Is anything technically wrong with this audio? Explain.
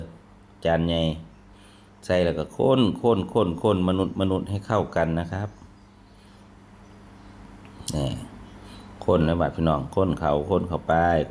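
No, nothing is technically wrong with this audio.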